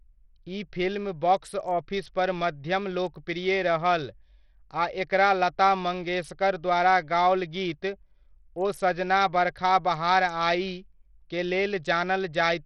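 Throughout the speech, heavy damage of the kind likely caused by Bluetooth SBC compression is audible. Coarse sub-band quantisation leaves a gritty, aliased haze, and the treble flickers. A spectrogram shows nothing above 14.3 kHz and patchy, blocky upper bands, which fits a starved bit pool near 64 kbps.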